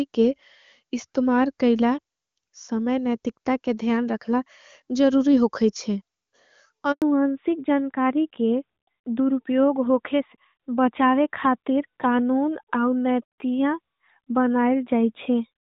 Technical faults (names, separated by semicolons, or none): handover gap; fallback to narrowband